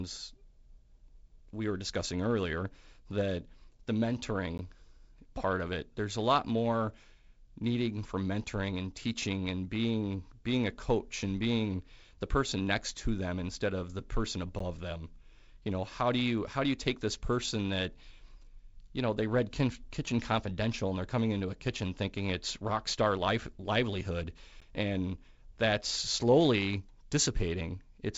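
At 4.58, 14.59 and 24.60 seconds, the speech drops out for about 13 ms each time. These are gaps between chunks. The audio was handled in 10-second pieces, and a short stretch of silence was left at each join. Nothing seems to be lost. The flow just stops briefly and restarts. The regular 10-second spacing gives it away. Across the gaps, the band-limited G.722 sound stays below about 7.7 kHz.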